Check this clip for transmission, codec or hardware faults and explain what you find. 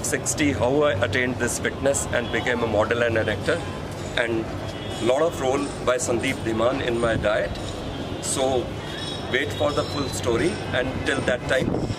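Nothing in the clip points to a transmission, codec or hardware fault. No dropouts, glitches or other disturbances can be heard anywhere in the audio.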